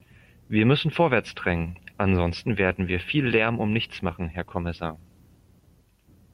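No technical faults are audible.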